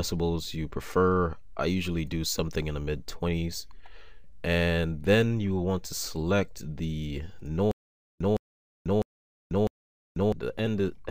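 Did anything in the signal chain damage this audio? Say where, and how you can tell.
Yes. From 7.71 s to 10.32 s there is a stutter with silent gaps: a 162 ms burst of sound repeats four times at a steady period of about 653 ms, each followed by roughly 491 ms of digital silence. That even cadence points to the playback or streaming buffer rather than the recording. The likely cause is a stalled stream that replays its last fragment on each retry and then runs dry, so the audio that should have filled that span is lost.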